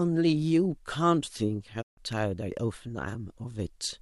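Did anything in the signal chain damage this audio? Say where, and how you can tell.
Yes. The first damage is a digital broadcast dropout at the reception and decoding stage. From 1.81 to 1.99 s the speech fades out over about 20 ms and stays silent, losing roughly 144 ms of sound, which fits about six failed frames being muted. The receiver stopped output until valid frames resumed. Unlike a dip in level or a soft gap in the talker's delivery, the hole is dead silence and the speech picks up later with material missing.

The second is an electrical switching spike in the analogue wiring, a sharp snap at 2.13 s. It is most likely a nearby switch, motor or static discharge arcing and inducing a brief pulse on the audio line. The speech carries on underneath, so it is an added impulse rather than lost samples. That sets it apart from the dropout just before it, which removes sound, and from a digital click at a buffer boundary.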